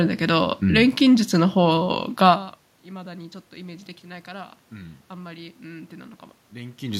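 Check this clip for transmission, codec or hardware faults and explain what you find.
No transmission, codec or hardware faults are present.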